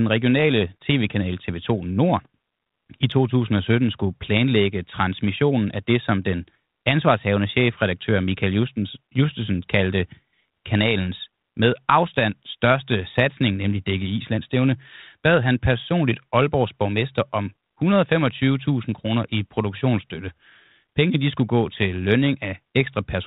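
No technical faults occur at any point in this speech recording.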